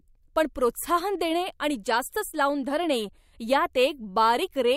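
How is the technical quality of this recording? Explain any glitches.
Nothing in this bit of speech trips up technically, so there are no glitches to explain.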